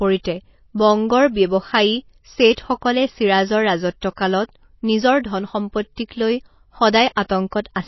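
From the first moment to the end, the speech has a dull, watery quality, with nothing above 5.8 kHz and a swirly shimmer on the sibilants. The likely cause is heavy MP3 compression, with damage this plain pointing to a very low bitrate, somewhere around 24 kbps. Short of bits, the encoder chops the top end at a fixed point and lets weak frequency lines flicker in and out between frames, which produces that underwater churn.

Pre-echo shows up at 2.53 to 2.57 s, a 41 ms smear of hiss just ahead of an attack, then more briefly at 4.01, 4.16, 5.96 and 7.51 s, each about 15 to 18 ms. In each case a sharp onset lands late in a codec block, and the quantisation noise meant for the loud part spills back into the quiet moment before it. You hear a short hiss leading in, and the attack itself sounds blunted.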